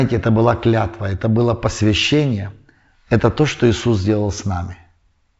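Nothing goes wrong anywhere in this speech recording, which is carried over G.722 wideband telephone coding at 64 kbit/s and so tops out around 7.7 kHz, just as that link should.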